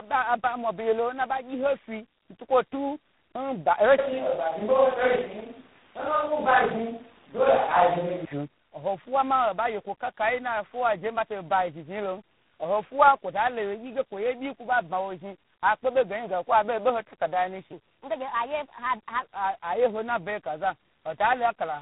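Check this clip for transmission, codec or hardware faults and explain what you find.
Two faults here: a tandem-coded chain under the whole clip, plus one short section at the wrong speed.

Tandem speech coding runs throughout. The audio sounds like it went through three speech codecs in a row, likely AMR-NB and twice G.726 with G.711 between. Each coder re-mangles the last one's output, so the speech comes out rough, muffled and warbly, with nothing above 3.9 kHz.

Section at the wrong speed from 17.73 to 19.22 s, right before "a yeho". It plays 1.31 times fast, pitched up about five semitones, likely from being fitted to the wrong clock.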